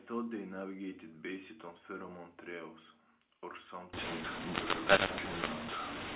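A mu-law and A-law mix-up starts at 3.93 s and runs to the end of the clip at 6.16 s. Up to that point the speech has the narrow, 4 kHz-limited sound of telephone coding, consistent with mu-law G.711 at 8 kHz. From 3.93 s, mu-law bytes are read back with the A-law table, so sample levels come out wrongly sized. The speech turns harsh and crackly, and low-level moments and gaps fill with hiss instead of falling quiet.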